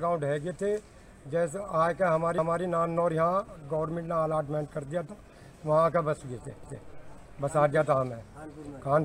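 A short stretch plays twice, at 2.38–2.63 s and again at 6.63–6.88 s, giving a stutter at each point. These are overlapping chunks: the audio was handled in 4-second blocks, each starting 250 ms before the previous one ended, so the join repeats that overlap.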